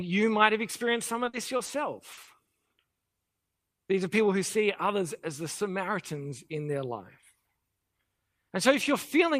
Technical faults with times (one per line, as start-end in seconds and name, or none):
1.25-1.69 repeated packet loss (robotic sound)
2.13-2.49 short concealed packet loss